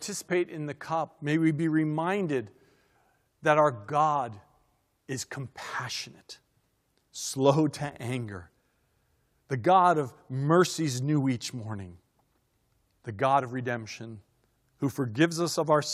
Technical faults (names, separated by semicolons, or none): none